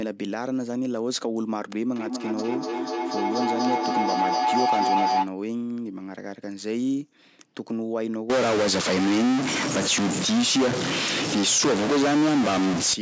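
Feedback howl runs from 1.96 to 5.33 s. Two devices in the same room are joined on the call, so the speech leaves one loudspeaker, reaches the other microphone, and comes back a little louder each trip. The repeats, about 200 ms apart, the loop's round-trip time, narrow onto a tone of roughly 700 Hz that swells until it is as loud as the speech itself.

A stuck bit takes over from 8.30 to 12.94 s. The speech picks up damage that rides on the waveform, and the gaps between phrases fill with noise instead of falling quiet. The likely cause is one data bit held permanently at 0 or 1 by a failed line or converter, knocking about half the sample values off by that bit's weight and flipping small values around zero. The call's microphone processing, which leaves nothing above 8 kHz and trims the lowest bass, is working normally.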